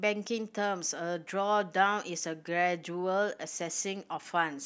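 No technical faults detected.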